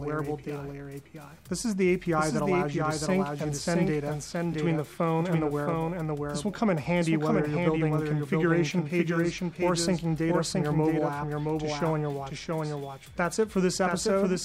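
From start to end, every sound returns a second time about 0.7 s later, somewhat quieter but full-band and dry, with no decay or room colour. This doubled audio track is likely a second, slower capture path or an edit holding two out-of-step copies mixed together.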